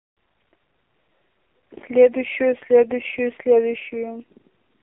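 Speech run throughout through an AMR narrowband mobile codec: nothing above 3.8 kHz, plus a buzzy, synthetic texture that plain telephone filtering lacks, pointing to roughly 6 kbps.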